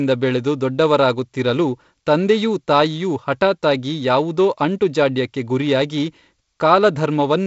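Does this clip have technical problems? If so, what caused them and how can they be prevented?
No, there is no fault in this speech clip; it is carried over G.722 wideband telephone coding at 48 kbit/s, with band-limiting to about 7.7 kHz, so there is nothing here that needs preventing.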